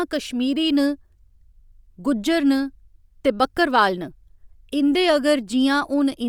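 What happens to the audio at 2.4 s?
At 2.4 s the speech carries a breathy, grainy edge across the whole clip, likely from Bluetooth LC3 compression: 10 ms transform frames, noise-filled upper spectrum, fitting roughly 48 kbps.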